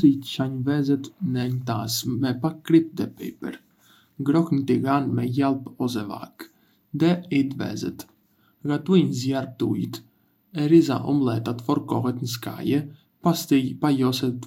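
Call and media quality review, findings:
No faults found in this speech recording.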